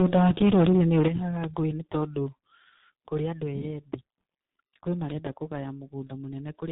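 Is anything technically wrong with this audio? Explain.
Yes. Tandem speech coding runs throughout the clip. The speech appears to have been decoded and re-encoded at each link border, passing through a chain that sounds consistent with G.726 at 32 kbit/s, then G.711 mu-law, and finally a G.723.1 coder around 6.3 kbit/s. Each stage codes the already degraded output of the one before, adding its own errors. Nothing is present above about 3.8 kHz, and the speech sounds muffled, rough and warbly.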